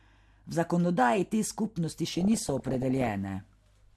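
From 2.10 to 3.09 s the speech breaks into DAB burbling: weak reception lets bit errors, roughly under one percent, slip past error correction, corrupting samples into short noise blips in single sub-bands and scale factors so sub-bands leap in level for up to a frame. Unlike a dropout, nothing mutes; instead bubbling, chirping squelches ride over the continuing sound.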